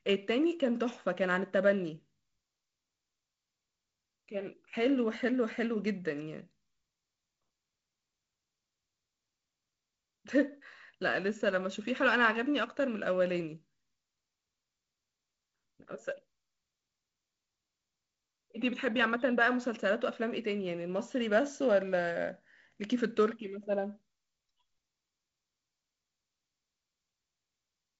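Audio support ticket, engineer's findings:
Nothing to flag here: the speech comes through as normal wideband telephone audio, with the G.722 coding leaving a faint hiss up top, nothing above roughly 7.7 kHz, and a slightly grainy low band that fits the 48 kbit/s mode.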